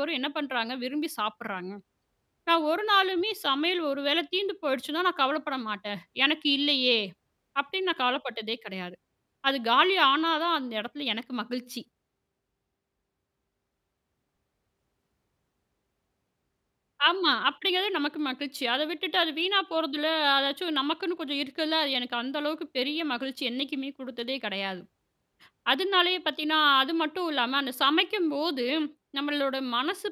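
No audible technical faults.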